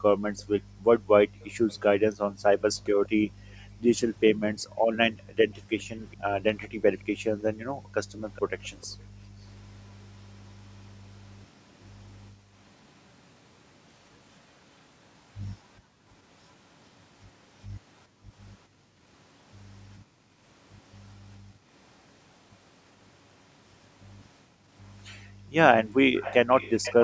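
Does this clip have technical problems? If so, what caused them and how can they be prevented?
Yes. Background gated by the echo canceller: from 0.0 to 12.55 s and from 15.8 to 25.53 s, the canceller clamped the microphone down while the far-end audio played. The room sound dips by up to about 40 dB, for roughly five seconds in the first span and two in the second. Gentler suppression settings or a headset prevent this.

Echo leak: from 1.69 to 8.86 s a faint delayed copy of the speech trails about 414 ms behind, and from 26.16 s to the end it returns noticeably louder. Likely the loudspeaker side's echo canceller failed to remove what its microphone picked up and sent it back. Headphones on that side prevent it.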